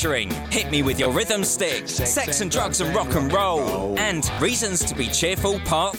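At 1.04 s a short piece of sound plays twice, and from 4.34 to 4.38 s a piece plays three times. Both are repeated buffers: fresh audio did not arrive in time, so the device replayed its last block. Each repeat lasts 20 ms, which fits a 20 ms buffer, and the sound skips ahead by about that much, then about twice that. Both are heard as a brief buzzy stutter. On a spectrogram, identical slices sit side by side with thin vertical lines at each hard join. The waveform shows the same cycle copied with abrupt seams.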